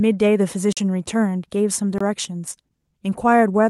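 At 0.73 s the speech drops into a block of digital silence for about 43 ms, which fits a 2048-sample buffer going unfilled, and again at 1.98 s for about 23 ms. Each cut comes in and out with no fade. The waveform shows flat runs, and the spectrogram shows blank vertical gaps.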